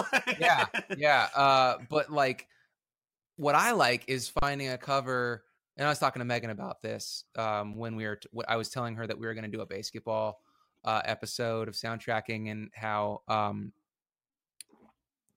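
An underrun with held sample occurs from 4.39 to 4.42 s, between "what I like is" and "a cover". For about 35 ms the output buffer ran dry, and the converter froze on its last sample value, so the waveform sits flat at a constant level instead of dropping to zero. The speech stops abruptly with barely a click. Almost no audio was lost: playback resumes where it paused, so the restart is soft and the following syllable is simply delayed.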